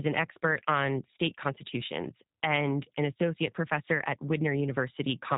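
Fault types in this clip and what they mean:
G.729 codec: Throughout the speech, a low-rate CELP-type voice codec rebuilds the signal from a vocal tract filter, a pitch predictor and a handful of pulses per frame, with plainly audible damage. The sound is rough and slightly synthetic, with nothing above about 3.8 kHz, which fits an 8 kbit/s coder. A plain low-pass filter would only dull the sound, but here the rough, synthetic texture of the speech is what marks it as coding.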